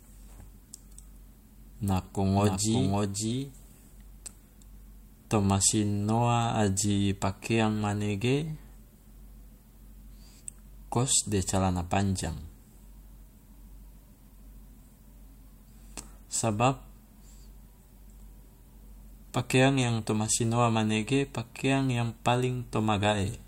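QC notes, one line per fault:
2.33–3.93 s doubled audio track: a clean copy sits about half a second behind, a few dB down, likely a second capture path; spectrogram shows offset duplicate patterns, abrupt edges.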